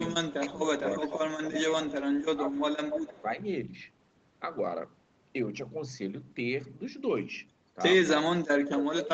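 From 0.4 to 0.81 s the speech dips by about 10 dB, likely speech suppressed in double talk: with both ends talking at once, the echo canceller cannot tell its own talker from loudspeaker echo and attenuates both, so the level sags in patches.

At 0.9 to 1.19 s a faint delayed copy of the speech trails the original by 290 ms, sitting roughly 15 dB below it. This is likely an echo leak, where a loudspeaker-side canceller lets part of its microphone pickup through and sends it back.

The suppression returns more heavily from 1.44 to 2.57 s, dropping about 20 dB in bursts. Overlapping it, from 1.52 to 3.22 s, the 292 ms echo comes back stronger, around 10 dB under the speech.

A brief, shallow dip of about 5 dB follows at 3.2 to 3.38 s.

From 8.17 s to the end the suppression is at its deepest, near 30 dB, and the speech almost drops out.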